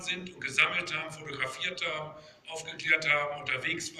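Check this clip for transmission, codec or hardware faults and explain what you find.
Checking the clip turns up no faults to explain.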